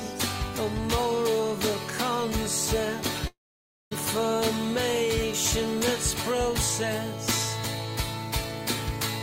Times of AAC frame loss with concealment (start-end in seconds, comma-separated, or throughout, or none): none